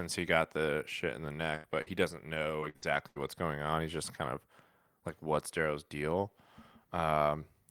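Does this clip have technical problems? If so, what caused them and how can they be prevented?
Yes. A burst of packet loss hits at 1.55 to 1.66 s and again at 1.82 to 1.88 s. The receiver stretched the last sound over the holes for 83 ms and 47 ms, fading it, then skipped ahead, dropping about 80 ms and 40 ms of speech. A steadier network path, or a larger jitter buffer that waits for late packets, would prevent this.

A lost packet rebuilt from error correction sits at 1.72 to 1.74 s and at 1.86 to 1.88 s. Each 20 ms frame was recovered from a low-bitrate copy carried in the following packet, so there is no gap, but the frame sounds rougher and noisier. Reducing packet loss on the link would remove the need for these rebuilt frames.

Repeated packet loss (robotic sound) runs from 2.34 to 3.18 s. Four gaps, the longest 76 ms, were each patched by continuing the previous sound, covering about 23% of that stretch with concealment. 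About a tenth of a second was rebuilt from error correction, and the result is choppy, with about 200 ms of speech missing. A more reliable connection, such as wired rather than congested wireless, would prevent it.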